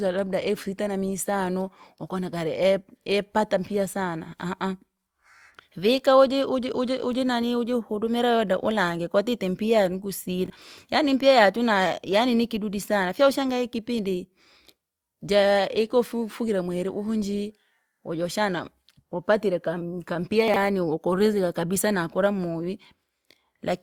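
At 10.46 s, chunks out of order: one 20 ms chunk plays one slot late, to 10.50 s. At 20.48 s a chunk arrives three slots late, jumbling 20.48 to 20.56 s. Each leaves three hard joins. The speech briefly sounds garbled.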